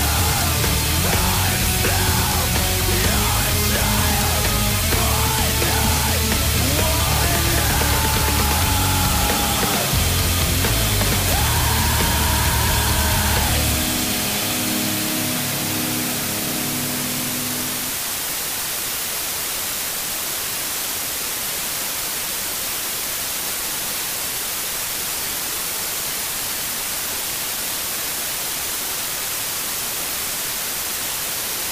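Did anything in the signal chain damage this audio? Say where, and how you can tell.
Yes. The damage happened at sample-format conversion, where the audio was requantised to about 3 bits with dither added before rounding. Dither turns what would have been gritty, signal-following distortion into a steady, even white hiss that runs from start to finish. With so few levels, that hiss sits only a few decibels below the sound itself, so it nearly swamps it. There is no crunch or harshness on loud passages, just a constant noise floor.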